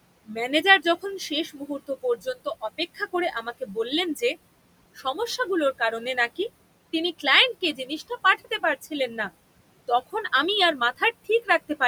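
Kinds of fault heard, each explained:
noise suppressor artifacts: The suppressor keeps pulling down whatever bands it judges to be steady noise, by about 20 dB, so the room noise, sitting about 17 dB under the speech, dips in the gaps and swells under the talking.
speech cut by the noise suppressor: The suppressor mistook parts of the speech for noise and turned them down with the background, by as much as about 17 dB. Soft sounds go faint or swallowed between 0.26 and 3.77 s, briefly before "কারণে নাকি তিনি", before "তখন আমি আর", and near the end.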